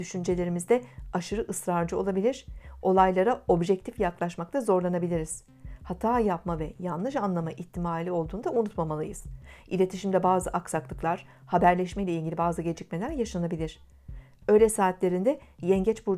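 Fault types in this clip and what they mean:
No faults can be heard anywhere in this clip.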